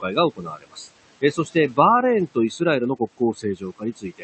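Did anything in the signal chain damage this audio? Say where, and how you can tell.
Yes. Noise suppressor artifacts run through the whole clip, from the call-processing stage: the room noise, which sits about 15 dB below the speech, is pulled down by about 18 dB between phrases and comes back up under them, because the suppressor gates each frame's noise-like bands separately.

Speech cut by the noise suppressor, also in call processing, occurs at 0.36 to 0.9 s (about 21 dB deepest drop, roughly half a second affected), 1.21 to 1.78 s (about 14 dB), 2.34 to 2.61 s (about 19 dB), and from 2.99 s to the end (about 19 dB). Quiet speech was classed as noise there and attenuated with it.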